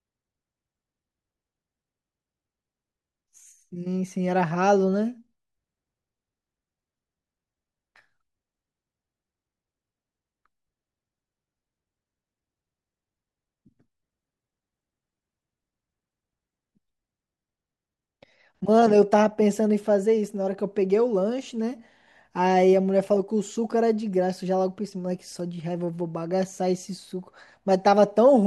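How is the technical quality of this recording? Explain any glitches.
No technical faults are audible in the recording, so there are no glitches to explain.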